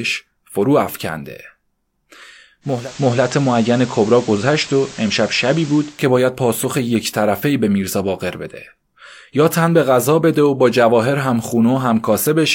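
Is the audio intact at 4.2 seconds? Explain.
No, at 4.2 s the receiver's fallen back to FM in a digital radio blending to analogue (2.61 to 6.06 s): hiss roughly 20 dB down.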